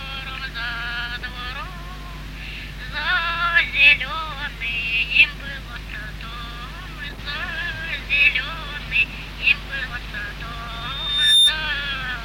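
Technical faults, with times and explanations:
10.67 to 11.6 s: loudspeaker feedback squeal. A single 3.6 kHz tone builds up over roughly 0.7 s to about 10 dB above the sound as the microphone re-amplifies its own loudspeaker. Unlike a steady interference whistle, it swells by itself.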